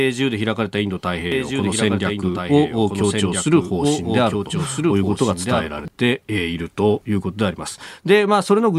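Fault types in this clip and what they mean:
Doubled audio track: a second full-band copy of the speech, around 5 dB quieter and trailing by about one and a half seconds, runs from 1.32 s to 5.88 s with abrupt edges and no room colour, likely from a slower capture path recording it twice.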